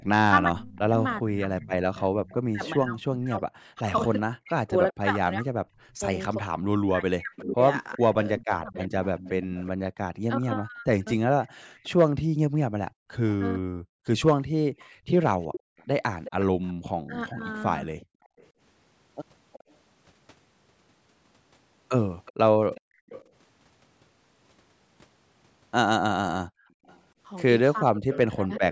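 From 0.0 to 13.87 s the talker's speech dips and breaks up, about 5 s in total and down by roughly 40 dB at worst. This is speech suppressed in double talk, likely because the echo canceller could not separate this talker from loudspeaker echo while both sides spoke. Unlike gating, it is the voice itself that drops.

From 1.96 to 23.27 s an echo leak is heard: a faint copy of the speech trailing 366 ms behind, at roughly 15 dB below it, likely residual loudspeaker pickup that the canceller missed. It adds a late duplicate rather than removing anything.

Between 11.49 and 18.38 s, background gated by the echo canceller makes the room sound drop out briefly, about 1 s in total and as much as about 37 dB. These are gaps in the ambience rather than cuts to the voice.

From 17.06 to 17.43 s the speech is again suppressed in double talk, sinking roughly 25 dB for about a third of a second, likely while the far side was talking.

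The background gating returns at 22.81 to 23.07 s (about 35 dB down) and at 26.46 to 26.86 s (about 36 dB down), each a short hole in the room tone that recovers once the canceller releases.

The echo leak reappears from 26.86 to 28.6 s, with the same 366 ms delayed copy at roughly 15 dB below the speech, likely the same incomplete cancellation.

From 27.82 s to the end, speech suppressed in double talk pulls the voice down by up to roughly 40 dB for about 0.7 s, likely the canceller clamping during overlap. The call microphone processing limits the band, with nothing above 8 kHz.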